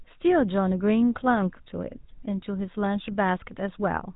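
From start to finish the speech carries the sound of the GSM full-rate codec, a plainly audible buzzy, gravelly roughness which fits a 13 kbps GSM full-rate stream. The codec rebuilds each voice from a vocal-tract model excited by sparse, evenly spaced pulses, so fine detail is replaced by a coarse rasp. Nothing survives above 3.8 kHz: a spectrogram shows a hard ceiling there with empty space above, and the harmonics below look smeared and grainy.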